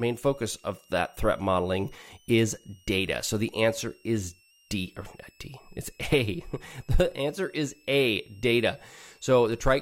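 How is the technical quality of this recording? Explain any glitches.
A faint, high whistle runs underneath the speech for the whole recording. It sits around 3 kHz, wandering between about 2.57 and 3.02 kHz, and stays well below the talker, somewhere near 35 dB down. This is a switching supply whistle. A switching power supply near the recording chain is cycling in an audible burst mode or beating against another supply, and as its load shifts the tone's pitch drifts within that band.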